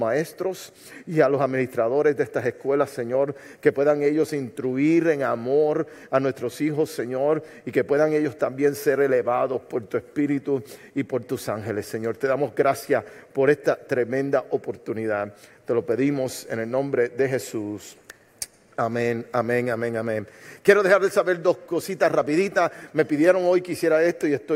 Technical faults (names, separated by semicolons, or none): none